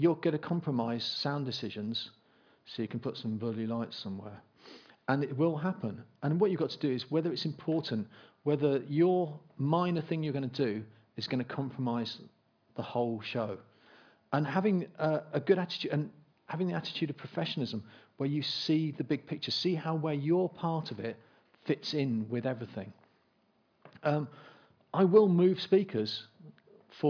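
Nothing here sounds wrong: no dropouts, glitches or distortion turn up anywhere in the recording.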